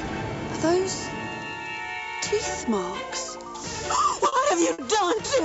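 Short stalls from late packets occur at 3.95, 4.28 and 4.72 s. The jitter buffer ran dry, so the sound is held 20, 40 and 60 ms, then resumes intact.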